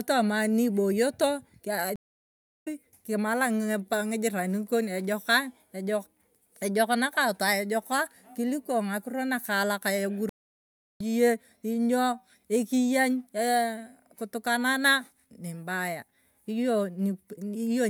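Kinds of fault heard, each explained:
Stream reconnect: the connection dropped at 1.96 s and again at 10.29 s, leaving gaps of 0.68 s and 0.67 s while the player reconnected and restarted its decoder. The speech then picks up roughly 0.7 s further on, so that bit's skipped.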